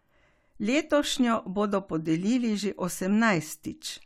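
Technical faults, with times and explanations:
No technical faults are heard in this speech.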